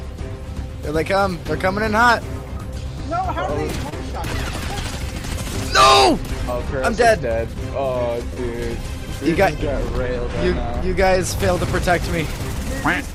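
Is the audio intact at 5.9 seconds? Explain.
Yes, the audio at 5.9 seconds is intact, with no audible fault at that moment.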